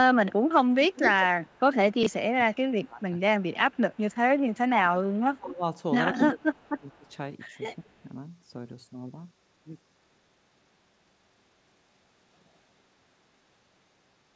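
From 0.81 to 5.17 s there's an echo leak: a delayed copy of the speech trailing about 188 ms behind, sitting roughly 10 dB under the main signal. The likely cause is a far end on a loudspeaker whose echo canceller didn't fully scrub what its mic picked up, so some of it was sent straight back.

Between 1.9 and 3.12 s the speech keeps ducking, dropping by as much as about 25 dB and going dull or patchy for around 0.7 s in total. That's speech suppressed in double talk, likely because the echo canceller couldn't separate the live talker from the echo while both were active and pulled everything down together.

At 2.03 to 2.06 s, right in the middle of that, you get chunks out of order. One 16 ms slice plays a chunk late, after the one that should follow it. Nothing is lost, but the jumbled order leaves a tiny garbled blip, which fits audio being handled in 16 ms chunks.

From 4.69 to 7.9 s the double-talk suppression comes back, likely from the same canceller, with the same dips of up to about 25 dB. 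This time it adds up to roughly 1.5 s of ducked, hollowed-out speech. Overlapping it, from 6.13 to 8.03 s, the echo leak returns, again trailing by 188 ms. It's now only about 5 dB down, so it's much easier to hear, and it's likely the same loudspeaker path letting it through.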